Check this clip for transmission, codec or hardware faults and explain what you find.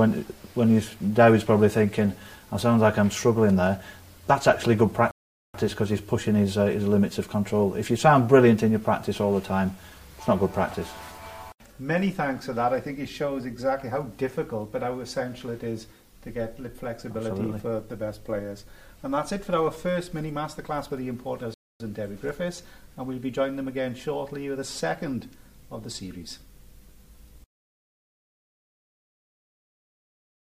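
Two rebuffering stalls interrupt the audio. At 5.11 to 5.54 s and 21.54 to 21.80 s, the player exhausted its downloaded buffer and paused, inserting 0.43 s and 0.26 s of silence. Playback then resumes exactly where it stopped. The waveform shows flat-line gaps, and the spectrogram shows clean vertical blank bands.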